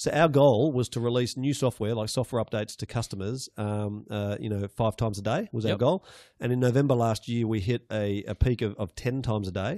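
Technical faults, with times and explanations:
No technical faults are audible anywhere in this speech recording.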